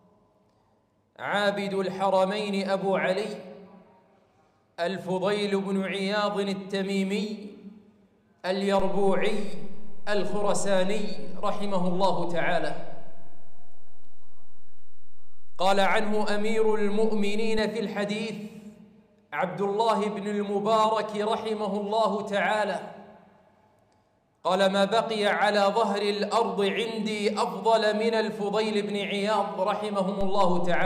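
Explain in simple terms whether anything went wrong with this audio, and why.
Two DC steps occur. At 8.80 s the waveform's resting line jumps and stays shifted until 17.59 s, then snaps back. Another jump comes at 30.21 s and lasts to the end. Each jump and each return sounds like a low thump. Unlike a dropout or a click from damaged data, the sound itself carries on unchanged through and after each thump. Only the baseline has moved.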